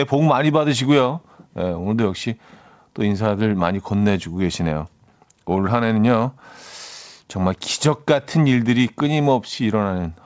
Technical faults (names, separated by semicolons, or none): none